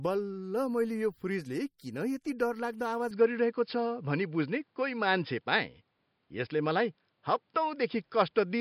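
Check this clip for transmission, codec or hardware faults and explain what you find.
Three faults are present: coding damage across the whole recording, one pre-echo, and a drop in input quality partway through.

Throughout, the speech carries plainly audible damage that is likely from MP3 compression at a low bitrate, around 48 kbps. Starved of bits, the encoder drops weak frequency lines frame by frame, so the speech sounds watery and swirly, and nothing survives above 21 kHz.

At 1.78 s, between "मैले यो फ्रिजले" and "किन यति डरलाग्दो", there is pre-echo. The codec spread quantisation noise across a block in which a sharp onset arrived late, so about 18 ms of hiss runs ahead of the attack and blurs it.

From 3.11 s to the end, just after "फ्रिजले किन यति डरलाग्दो", the sound likely comes from an input switched to a poorer device. With no gap at the switch, the band narrows to nothing above 5.2 kHz, leaving the speech duller. 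The level changes by around 5 dB, and a new noise floor appears well below the speech.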